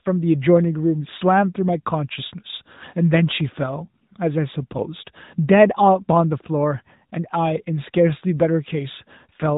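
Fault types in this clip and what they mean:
AMR narrowband mobile codec: throughout the speech, nothing passes above 3.8 kHz. The voice sounds plainly buzzy and synthetic because each 20 ms frame is rebuilt from a vocal-tract model driven by a few pulses, which fits AMR-NB near 10 kbps.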